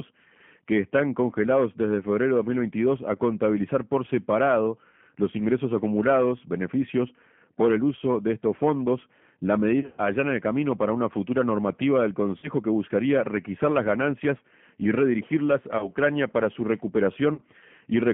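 Spanish speech, heard throughout through the G.729 codec. The band runs from about 150 Hz to 3.4 kHz, so everything above is gone. The coding damage is plainly audible. The speech sounds rebuilt rather than captured, which fits an 8 kbit/s G.729A stream. VoIP packet loss, concealed by the speech codec, breaks in four times. At 9.80 to 10.02 s, after "de estos fondos la" and before "allana el camino para", about 140 ms is lost, scattered over 180 ms. The longest gap is 50 ms. At 12.38 to 12.50 s, after "una futura normativa del" and before "que buscaría requisar las", 50 ms is lost. At 15.78 to 15.89 s, after "las ganancias y redirigirlas" and before "para su", 30 ms is lost. At 17.34 to 17.41 s, 40 ms is lost. In each gap the decoder carries its last pitch and filter forward and lowers the level, so the sound smears into a fading buzz or coloured noise. Recovery lags after the gaps.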